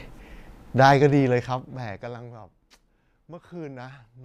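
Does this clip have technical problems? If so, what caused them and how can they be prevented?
Yes, there's zipper noise from 0.9 to 2.42 s as the speech level drops by around 25 dB. The gain moves in unsmoothed 1 dB jumps, about fifteen a second, so each jump clicks. Interpolating the gain per sample would prevent it.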